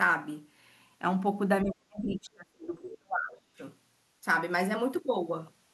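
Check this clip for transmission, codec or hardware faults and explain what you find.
Two echo-cancellation faults overlap in the middle of this speech clip, one muting the talker and one letting a second voice through.

Speech suppressed in double talk runs from 1.62 to 3.61 s, about two seconds in all. It sounds as though both ends were talking at once. The echo canceller on the talker's side likely could not tell the local voice from the loudspeaker's echo, so it turned everything down. The voice sinks by as much as roughly 30 dB until it recovers after 3.61 s.

The other side's voice leaking through appears twice inside that dip, at 2.09 to 2.15 s and 2.91 to 2.97 s, each about 60 ms long. The far-end voice, played on the talker's loudspeaker, was likely not fully removed from the microphone signal. What remains are brief scraps of a second voice, roughly 20 dB below the speech.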